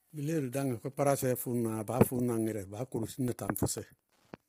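Wi-Fi interference runs through the whole clip as a faint, steady ticking about ten times a second, well below the speech. A nearby Wi-Fi radio's beacon, repeating every 102.4 ms, is being rectified by the audio circuitry and leaking in as regular clicks.

Low-delay AAC compression is the likely cause of the heavy roughness heard throughout: the speech sounds grainy and smeared, with noise filling the gaps between harmonics and a thin, synthetic-sounding top end. The coder's very short frames resolve pitch poorly, and the damage fits a bitrate near 24 kbps.

Periodic USB or driver dropouts appear from 3.08 to 4.38 s, repeating every 0.1 s, around fifteen in all. Something is blocking the USB bus or audio driver at a fixed interval, and each time a couple of milliseconds of audio is replaced by silence. The gaps are heard as evenly spaced ticks riding on the speech.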